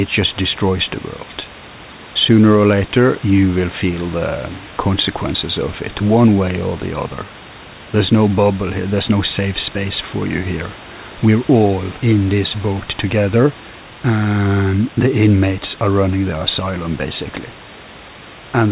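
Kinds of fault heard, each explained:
No faults can be heard in this speech. The call path carries nothing above 4 kHz, which fits a G.711 mu-law codec, and the room noise sits about 22 dB below the speech.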